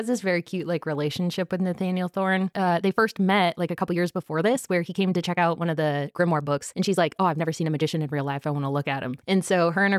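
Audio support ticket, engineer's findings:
Time-stretched section, 2.40 s to 8.22 s. Speech suddenly rushed, about 1.35x pace. Pitch unchanged. Abrupt pace shift at both edges. Likely cause: time-scale software squeezing the segment to fit a target length. Keeps pitch by dropping short slices of audio. Lost slices give the hurried feel.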